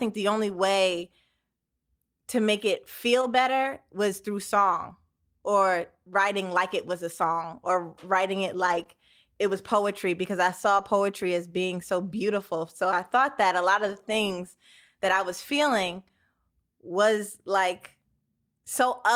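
This is a speech clip with two related network faults. There are three stretches of lost packets rebuilt from error correction, seven packets in all, at 3.21 to 3.23 s, 8.67 to 8.81 s and 10.77 to 10.83 s. Later packets carried low-bitrate copies of the missing audio, and the decoder played those instead, so nothing drops out. The rebuilt stretches sound rougher and noisier. Right after "song or writing it", at 8.83 to 8.87 s, there is a short concealed packet loss. About 20 ms never arrived, and the decoder extended the preceding sound to fill it. This causes a brief smear before "it was poetry because".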